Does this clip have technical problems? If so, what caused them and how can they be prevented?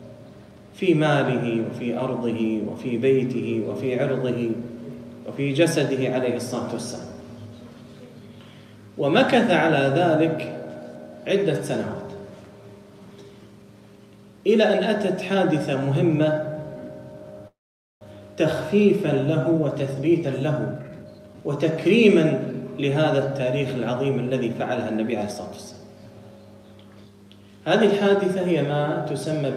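Yes. Between 17.47 and 18.03 s a call audio freeze occurs, most likely because packets were held up in the network and the receiver's jitter buffer ran dry. The last fragment of sound is stretched into a brief fading buzz that drops to silence for about 0.48 s, filling roughly 0.54 s in all. When the sound resumes it picks up exactly where it stopped, so nothing is lost, but it now runs about 0.54 s later than before. Prioritising call traffic and keeping a modest jitter buffer margin would help prevent this.

From 19.53 to 22.62 s a jitter buffer speed-up follows. The delayed packets left the buffer holding more audio than its target, so the receiver drained the excess by repeatedly cutting out pitch-period-sized slices. The sound plays at about 117% speed with its pitch unchanged, so this stretch comes across as rushed, with around half a second removed in total. Steadier packet delivery, or a buffer that catches up more gradually, would prevent this.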